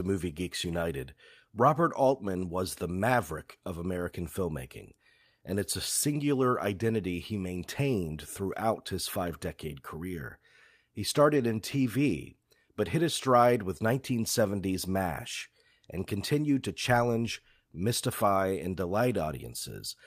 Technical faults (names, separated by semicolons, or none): lost packet rebuilt from error correction